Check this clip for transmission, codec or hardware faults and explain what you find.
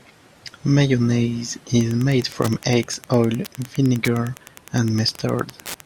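There is one hardware fault, Wi-Fi interference, from 1.80 s to the end of the clip. A nearby Wi-Fi radio is coupling into the audio circuit, which rectifies its transmissions. The radio's beacon repeats every 102.4 ms, so the speech picks up a steady ticking close to ten times a second. The ticks sit well below the speech, at roughly 25 dB down.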